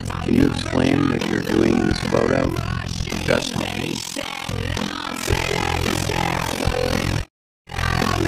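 From start to finish the audio flutters with a harsh, robotic tremolo near 40 Hz. This overlap-add ripple, about 60 dB deep, comes from windowed frames overlapping without constant summed gain.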